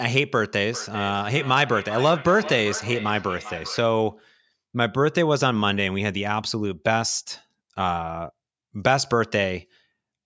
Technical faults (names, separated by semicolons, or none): feedback echo between two devices